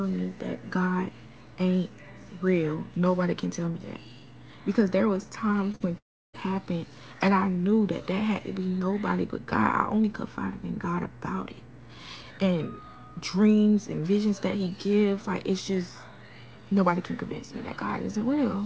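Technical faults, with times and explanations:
5.72–5.75 s, short concealed packet loss: About 20 ms of audio failed to arrive, and the receiver filled the hole by stretching the preceding sound for 15 ms before blending back. It is heard as a brief smear or wobble rather than a fading buzz, because the gap is too short for a noticeable decay.
5.75–5.82 s, burst of packet loss: About 40 ms of audio went missing immediately after the first gap, and the receiver continued the last sound for 46 ms while turning it down. Unlike the wobble just before it, this comes across as a held, fading buzz or hiss, and the audio resumes further on with the lost stretch skipped.
5.98–6.35 s, long network dropout: Roughly a third of a second of audio disappears. A brief continuation of the last sound fades away, and then about 330 ms of near silence follows before the sound returns further on. The cause is likely nothing reaching the receiver for that stretch. 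The long silent tail is what sets this apart from the shorter bursts, which are filled with sound from start to finish. Across all three gaps the G.722 call path holds nothing above 8 kHz, so the concealment fills carry no high-frequency content either.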